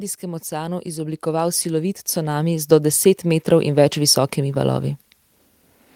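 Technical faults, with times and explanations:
0.2 to 5.02 s, automatic gain rising: the automatic gain control judged the input too quiet and kept turning its gain up, by about 16 dB over nearly five seconds, so the speech and the background noise swell louder together in one slow, steady climb.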